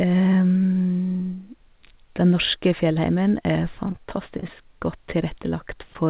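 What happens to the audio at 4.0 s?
At 4.0 s the sound turns choppy and robotic, with small pieces dropping out in quick succession from 3.87 to 4.50 s. This is repeated packet loss: about seven short holes, none longer than 28 ms, each patched by stretching the last received sound, so roughly a sixth of that stretch is filled-in rather than real audio. Throughout, the narrow band, with nothing above 4 kHz, fits a G.711 call codec.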